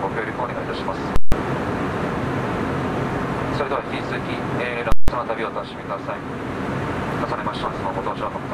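The audio suffers from DAB burbling in three stretches: 0.52 to 0.97 s, 3.09 to 4.07 s, and 7.49 to 8.33 s. Weak reception lets bit errors slip past the error correction, at a rate of a little under one percent. The corrupted samples put short blips of noise into single sub-bands. A separate fault, invalid numbers at full scale, strikes twice, from 1.16 to 1.32 s and from 4.92 to 5.08 s. Each time a very loud pop opens a 160 ms gap of silence, and a second pop closes it. A calculation went to infinite or invalid values, which were clamped to the largest sample value, so the output sat pinned at one extreme value, far beyond the audio's peaks, for the whole block.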